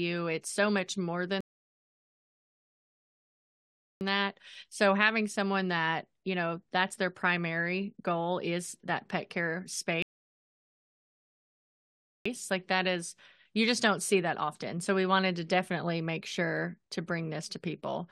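At 1.41 s and again at 10.02 s, rebuffering stalls halt the speech for 2.6 s and 2.2 s: the player's buffer empties, playback pauses in silence, then resumes exactly where it stopped.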